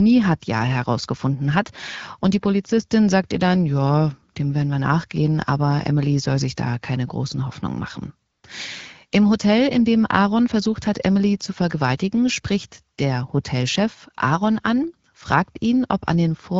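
At 4.33 s, between "sagt ihr dann ja" and "dem werden wir nachgehen", and again from 8.31 to 8.43 s, AMR comfort noise replaces the background with smooth synthetic hiss. The spectrogram shows a featureless, evenly textured patch with abrupt edges.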